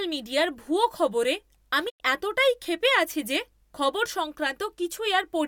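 A digital broadcast dropout runs from 1.88 to 2.02 s in this speech. The receiver stopped getting usable data, either because the signal was lost or because incoming frames failed their error check, so it muted its output instead of playing corrupted audio. The speech fades to silence over about 20 ms, leaving a hole of roughly 96 ms of missing material, which fits about three lost frames. It then resumes further along, and whatever was broadcast during the gap is gone.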